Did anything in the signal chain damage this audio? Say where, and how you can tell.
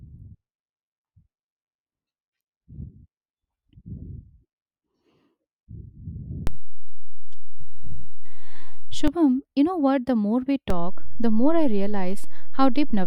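Yes, a DC step at the converter. The baseline shifts about -13 dBFS at 6.47 s, returns at 9.08 s, and shifts again at 10.70 s, each with a thump.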